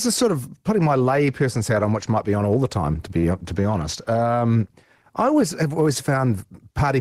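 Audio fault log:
3.18 to 3.24 s, short stall from a late packet: after "the time to be", the sound is held about 48 ms while the jitter buffer waits, then resumes intact, unlike a dropout.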